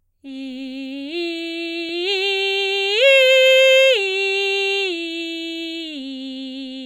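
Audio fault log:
No fault to log for this music clip.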